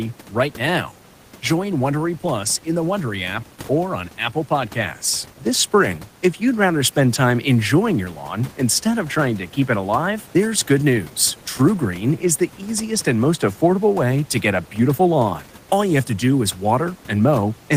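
No technical faults can be heard anywhere in the speech, and the only other sound is the room's own background noise, which sits about 27 dB below the voice and belongs to the recording rather than to the system.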